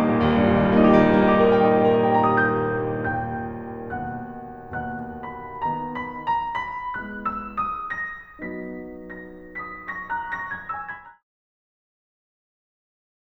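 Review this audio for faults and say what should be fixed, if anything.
Nothing here needs fixing; the music just eases out with a smooth fade that begins around ten and a half seconds and wraps up by 11.24 s, exactly as you'd want an editor's fade to sound.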